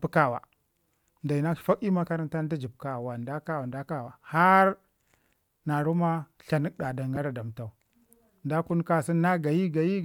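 Lost LE Audio frames occur at 1.59 to 1.61 s, just before "fak ii", and again at 7.16 s. The first gap lasts about 20 ms, which fits two missing 10 ms frames. The second is about 10 ms, consistent with a single frame. In each, the LC3 decoder fills the hole by repeating the previous spectrum with randomised signs, so the speech briefly turns into a short, noisy smear.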